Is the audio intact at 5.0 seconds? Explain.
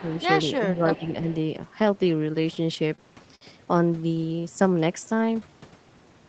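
No. From 4.36 to 5.51 s a jitter buffer slow-down is under way. The receiver stretched the audio by repeating pitch periods to build a reserve. About 167 ms was added, so the speech runs at 86% speed with unchanged pitch and drawn-out sounds.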